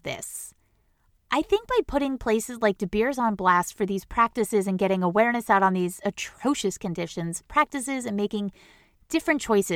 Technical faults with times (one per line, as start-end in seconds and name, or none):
none